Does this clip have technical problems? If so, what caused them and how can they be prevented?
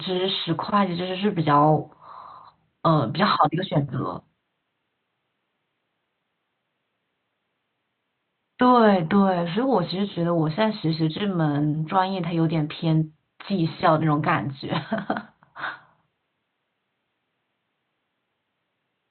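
No, there's nothing technical to fix or prevent here, since the only thing besides the speech is a bit of ordinary room noise sitting about 55 dB below it.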